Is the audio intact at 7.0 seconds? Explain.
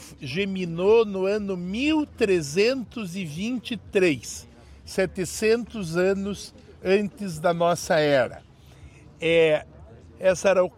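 Yes, the audio is intact at 7.0 seconds, with no dropout, click, distortion or other fault to be heard at that point.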